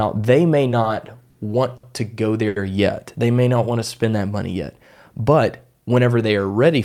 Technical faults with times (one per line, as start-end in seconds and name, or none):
0.70-1.35 repeated stalls (stutter)
1.77-1.84 short stall from a late packet
2.48-2.57 short stall from a late packet
5.33-5.99 jitter buffer speed-up